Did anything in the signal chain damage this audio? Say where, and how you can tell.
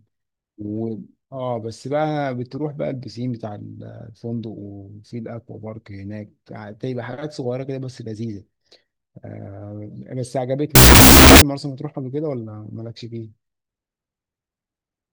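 Yes. At the sample-format conversion stage, a wrong sample width from 10.75 to 11.42 s turns the speech into loud noise, half speed and an octave low, which fits 16-bit data read as unsigned 8-bit. A spectrogram shows broadband noise masking faint, compressed harmonics, and the waveform swells.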